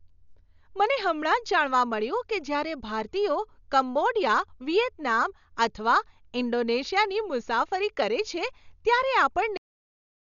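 A low-bitrate encoder that starved many frequency lines of mantissa bits is the likely cause of the Dolby Digital compression damage running through the whole speech clip. The band stops at 6.9 kHz, leaving the speech dull, and noise-filled gaps add a rough, fluttering grain, heavy damage which fits a bitrate around 48 kbps.

At 9.57 s the final buffers were never written or played, giving a cut-off end. The speech halts in the middle of a sound and falls straight to digital silence with no natural decay, staying silent for the remaining 0.64 s.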